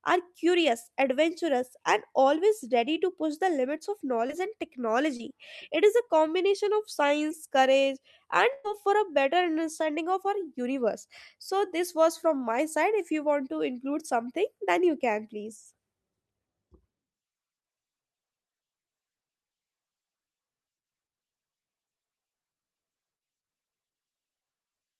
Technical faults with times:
4.27-4.31 short concealed packet loss
5.17-5.21 short concealed packet loss
8.53-8.74 burst of packet loss

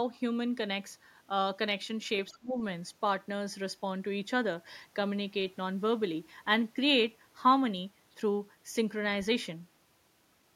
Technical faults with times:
2.32-2.57 speech suppressed in double talk

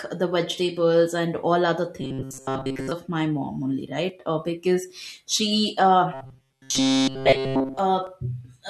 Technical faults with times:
2.01-2.91 robotic sound from repeated short buffers
6.14-7.79 robotic sound from repeated short buffers
8.07 overlap between stream segments

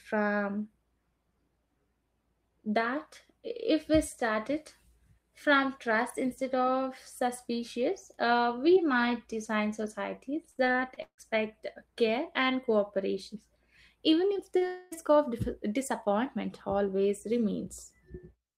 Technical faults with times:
10.51-11.20 repeated packet loss (robotic sound)
14.34-14.63 short concealed packet loss
14.67-14.93 long network dropout

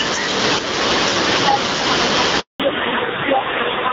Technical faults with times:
0.00-3.93 gain pumping
2.40-2.60 handover gap
2.60-3.93 fallback to narrowband

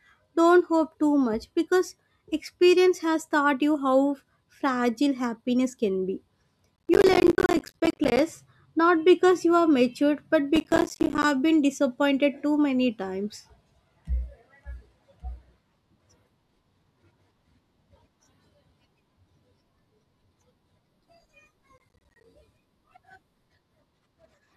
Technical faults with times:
6.76-8.19 processor overload crackle
10.56-11.24 processor overload crackle
21.78-22.24 processor overload crackle

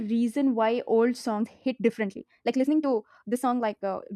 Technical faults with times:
1.35-4.16 time-stretched section

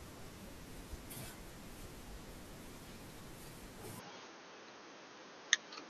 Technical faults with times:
3.99-5.90 input switched to a poorer device

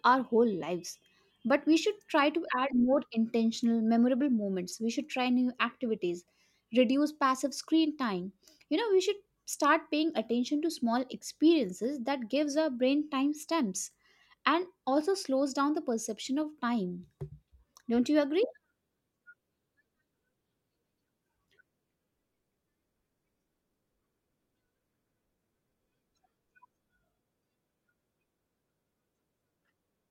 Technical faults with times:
2.18 electrical switching spike

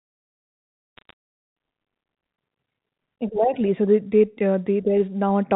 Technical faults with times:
0.97-1.13 bit errors on a digital phone line

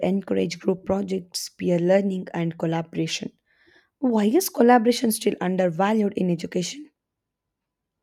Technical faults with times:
none

